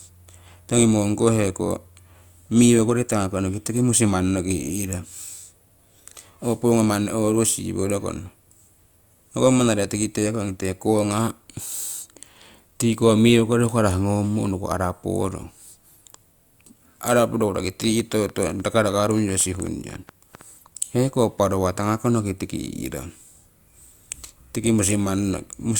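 A likely source of interference, such as nearby equipment or a faulty connection or power supply, injects a train of clicks into this speech recording from 17.84 to 20.42 s: around twenty similar pulses at about 6.6 per second, unevenly spaced and roughly as loud as the speech, heard as irregular ticking.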